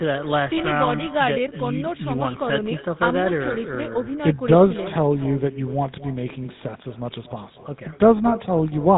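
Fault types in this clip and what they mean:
Echo with no canceller: the far end is playing the call through a loudspeaker, its microphone captures that playback, and nothing strips it out, so the speech returns after the network round trip. Here every phrase is trailed by a copy roughly a fifth of a second later, about 17 dB quieter and thinner. Unlike room reverberation, which smears sound continuously, this is a distinct, delayed repeat of the whole phrase.
GSM full-rate codec: the speech has passed through the original GSM coder, which rebuilds the voice from a vocal-tract model excited by a sparse, regularly spaced pulse train, consistent with a 13 kbps stream. The damage is plainly audible as a buzzy, gravelly roughness, and nothing above 3.8 kHz survives. That grainy, rasping texture sets it apart from ordinary narrowband telephone filtering, which dulls the top end but leaves the voice smooth.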